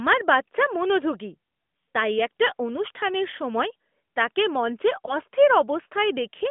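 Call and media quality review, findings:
Lost AMR speech frame at 5.06 to 5.15 s: brief dip or warble in the speech, then recovery weak or rough for a moment. Probable component: radio link into AMR-NB decoder. One 20 ms frame failed its checksum; decoder concealed it by repeating the last good pitch and vocal tract parameters at reduced gain. Sits on a narrowband AMR path, band roughly 200 Hz to 3.5 kHz, light codec coloration consistent with the 12.2 kbps mode.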